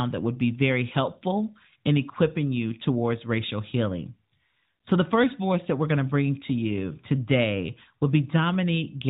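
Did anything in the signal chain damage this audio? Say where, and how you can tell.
No, nothing in the signal chain damaged this speech.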